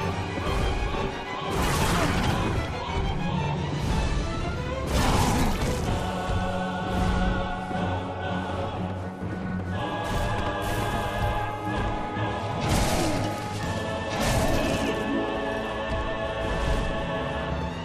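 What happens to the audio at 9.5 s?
A brief stutter from 9.49 to 9.54 s, where 50 ms of sound plays twice: overlapping chunks, each starting before the previous one ended, consistent with 6-second chunks.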